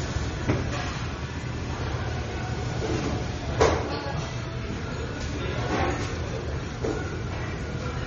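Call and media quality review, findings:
Watery, swirly texture across the whole clip, with metallic chirps on bright transients and smeared attacks; nothing above 7.9 kHz. Likely MP3 compression at a starved bitrate, consistent with about 32 kbps: treble cut fixed, weak frequency lines toggling between frames.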